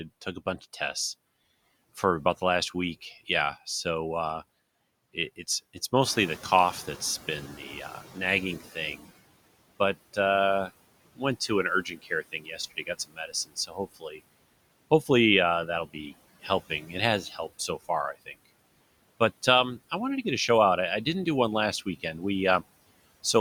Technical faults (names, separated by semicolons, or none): noise suppressor artifacts; noise suppressor catching up; speech cut by the noise suppressor